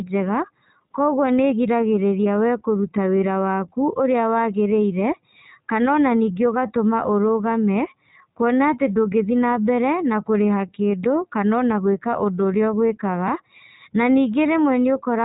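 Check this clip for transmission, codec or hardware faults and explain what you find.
The whole clip carries iLBC codec damage, plainly audible. Throughout, this narrowband coder rebuilds the speech frame by frame, each frame's excitation coded independently, which fits 20 ms frames at 15.2 kbps. The result sounds rough and slightly synthetic. A spectrogram shows a hard ceiling near 3.8 kHz, with nothing above it.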